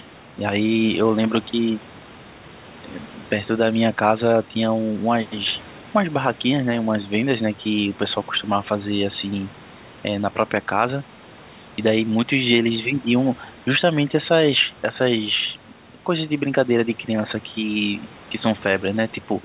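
No technical faults can be heard anywhere in this speech, which comes through a call path with its usual narrow telephone bandwidth.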